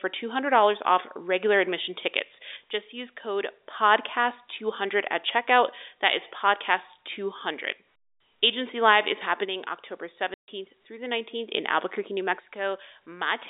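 At 10.34 s the speech breaks off into a 140 ms hole of packet loss filled with silence, lasting to 10.48 s, which fits seven 20 ms packets. Unlike smoothed-over concealment, the gap is plain silence, with hard edges.

From 12.40 s to the end, the level drops abruptly by about 6 dB and stays down, likely because one channel drops out before the mono sum. It is a sudden step rather than a gradual fade, and the band-limited telephone sound of the G.711 line is unchanged across it.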